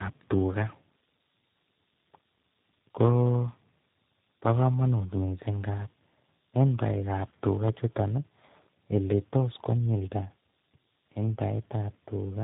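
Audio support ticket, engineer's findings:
Tandem speech coding, throughout the clip. Rough, muffled, warbly speech; band-limited, nothing above 3.8 kHz. Sound points to three speech codecs in a row, the last fitting G.729A at 8 kbit/s, with ADPCM-type stages before it. Each hop decodes and re-encodes the previous coder's degraded output, so the errors stack up at every link border.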